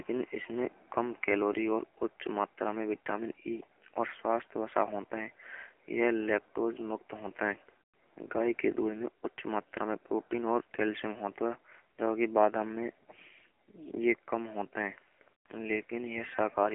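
It's speech that's gone through the AMR narrowband mobile codec for its whole length, and it sounds like an old phone call. The band is squeezed to roughly 300 Hz to 3.4 kHz, with nothing above 3.6 kHz, so the low body and all the air and sibilance are gone. The coding damage is plainly audible: a buzzy, synthetic edge from the vocal-tract model running on very few pulses per frame, which points to one of the low AMR-NB modes, around 7.4 kbps.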